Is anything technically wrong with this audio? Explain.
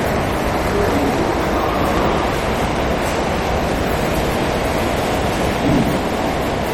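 Yes. Two faults run through the whole clip.

First, a block size mismatch (truncated). One stage writes longer blocks than the next reads, so each block's tail is dropped. That fits a stage reading 1024-sample blocks. You hear a 43.1 Hz buzz. The audio runs 1.12 times fast at roughly normal pitch.

Second, the sound is plainly degraded throughout. It has a watery, swirly texture, and nothing is present above 17.9 kHz. The likely cause is MP3 compression at a low bitrate, around 48 kbps. The encoder cuts the treble and drops weak frequency components from frame to frame.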